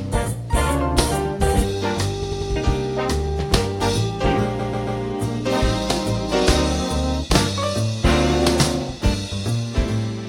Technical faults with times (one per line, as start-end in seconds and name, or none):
2.22-2.50 repeated frames
4.58-5.00 repeated frames